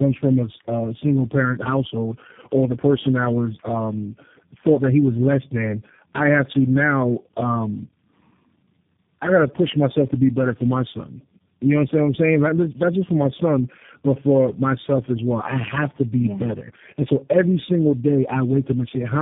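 Throughout, the speech sounds rough, muffled and warbly, with nothing above about 3.7 kHz: tandem speech coding, likely four speech codecs in a row, each re-coding the last one's output.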